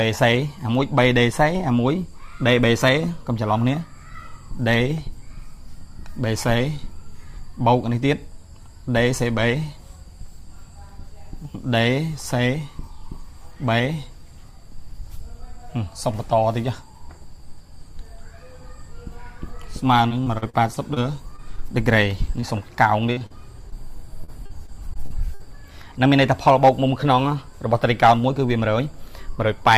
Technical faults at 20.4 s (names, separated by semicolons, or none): repeated packet loss (robotic sound)